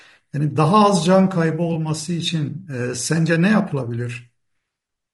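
From start to finish the speech has a rough, grainy texture, with a noisy haze filling the gaps between harmonics and a thin, somewhat synthetic top band. The likely cause is low-delay AAC compression of the AAC-ELD kind used for video calls, and the plainly audible damage fits a bitrate around 32 kbps. Its very short frames resolve pitch harmonics poorly. A band-limited or bandwidth-extended codec at a higher bitrate would sound dull or airy without this constant roughness between harmonics.

From 1.73 to 1.76 s there is AAC frame loss with concealment. The decoder lost roughly 20 ms of coded audio, consistent with a single missing frame, and filled the hole by extrapolating from the last good spectrum. The result is a brief smeared, noisy and phasey patch rather than a click or a drop to silence. Because the loss is so short, the concealment never fades out. This sets it apart from a dropout or buffer underrun, which would leave a hard gap or a discontinuity.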